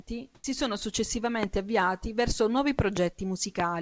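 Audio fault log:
0.35–0.44 s, comfort noise in place of the background: For 90 ms the real background, already about 40 dB below the loudest sound, gives way to a steady, featureless hiss about 14 dB quieter. The sender likely stopped transmitting during a pause, and the receiver substituted synthetic noise.
0.41–0.44 s, onset clipped by the voice detector: The sound returns abruptly, its first 30 ms missing and filled with the same synthetic noise. The sender's voice detector was likely late to register that sound had restarted, so the soft beginning was never sent.
1.43–1.45 s, 2.79–2.99 s and 3.60–3.62 s, loud pop: Sharp pops sit well above the sound, which carries on beneath. There is one pop just before "avviati verso nuovi", two in quick succession just after it, and one at 3.60 s, likely caused by sudden voltage steps from a plug, switch, static or driver glitch.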